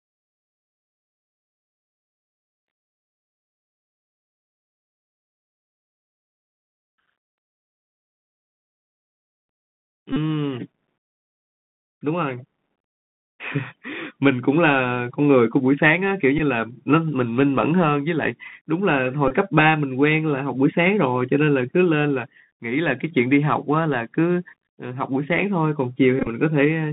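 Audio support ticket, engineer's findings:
Bluetooth CVSD headset codec, whole clip. Narrowband speech, roughly 150 Hz to 3.7 kHz. Scratchy sibilants, granular hiss. One-bit delta coding, fits 64 kbit/s.

Bluetooth headset packet repeated: 10.13–10.17 s, 16.38–16.40 s, 19.28–19.31 s, 26.19–26.27 s. Brief buzz near 267 Hz. Lost packets replaced by repeats every 3.75 ms. Last one scattered, short runs.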